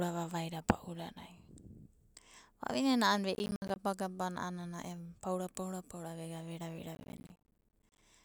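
Processor overload crackle hits at 3.35–3.76 s and again at 6.95–8.02 s. Missed buffer deadlines, around 10 ms each, leave silent gaps that add up to gritty tearing.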